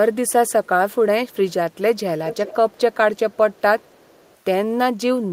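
A far-end echo canceller likely failed to remove its loudspeaker pickup, so an echo leak sends a delayed copy of the speech back into the call. Faint scraps, very far below the speech, trail it by about 356 ms at 0.48–0.68, 0.91–0.95, 1.28–1.53 and 1.96–2.0 s. From 2.27 s the delay grows to about 399 ms. The copy turns much stronger at 2.27–2.97 s, then faint again at 3.17–3.61 and 3.8–4.36 s.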